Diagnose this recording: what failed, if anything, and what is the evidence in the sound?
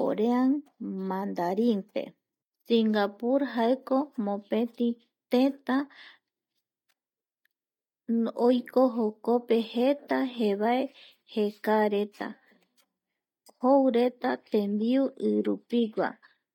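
Nothing failed: no stage from capture to playback leaves an audible fault anywhere in this speech recording.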